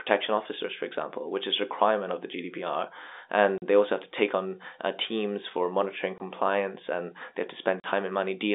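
Packet loss filled with silence cuts the speech three times: 3.58 to 3.62 s, 6.18 to 6.20 s, and 7.80 to 7.84 s. Each gap is 40 or 20 ms, which fits lost 20 ms packets. The receiver played silence instead.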